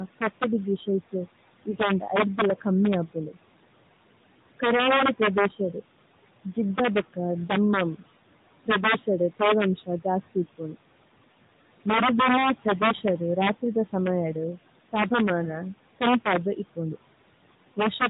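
Throughout the clip, integer overflow turns the loudest speech peaks, driven about 6 dB past the limit, into sharp cracks. On the waveform, a small share of samples wraps to the opposite sign, flipping across the full range. A spectrogram shows thin broadband vertical streaks.

Noise suppressor artifacts are also present throughout. The background is pulled down by about 18 dB between phrases and swells back under the speech. On a spectrogram this appears as a dark floor in the pauses and patchy, blinking blotches beneath the voice.

From 1.70 to 1.75 s and again from 15.44 to 15.50 s, lost AMR speech frames produce a brief dip and warble. Each fits a single concealed 20 ms frame with fading gain. On a spectrogram, the harmonics briefly smear and weaken.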